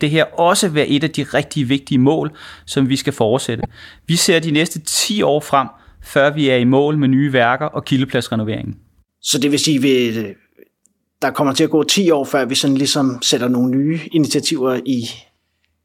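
At about 3.60 s, right after "mål som vi skal", there's a brief frames out of order fault running to 3.67 s. Two neighbouring 26.1 ms blocks got decoded in swapped order, so that snippet plays with its halves swapped. You hear a quick garbled flutter, and no time goes missing.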